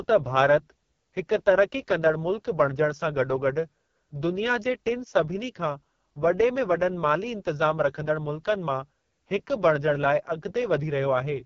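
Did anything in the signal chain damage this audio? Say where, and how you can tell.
Yes, at the codec stage: the whole speech clip carries heavy AMR wideband (HD Voice) codec damage, rough and raspy throughout, with nothing above 6.9 kHz. That harshness fits the lowest 6.6 kbit/s mode, where too few pulses and bits model the voice, and the top band is just filled with shaped noise.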